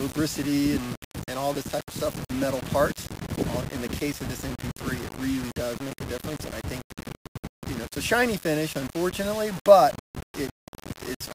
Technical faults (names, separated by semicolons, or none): low bit depth without dither